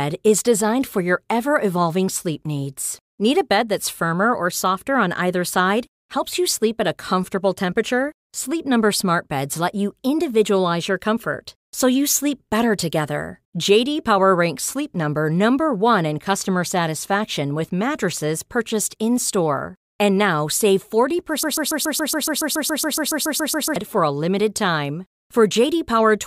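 From 21.43 to 23.76 s, a broken-record loop occurs. The player or stream likely stalled and kept resending the last fragment it held, so a 140 ms slice of speech repeats 17 times back to back as a rapid stutter. The audio that should have played there is lost, and normal speech resumes with "for a limited time".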